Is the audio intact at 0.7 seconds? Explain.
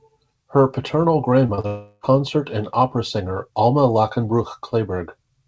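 Yes, the speech at 0.7 seconds is intact, carried cleanly through the call path with its band ending at about 8 kHz.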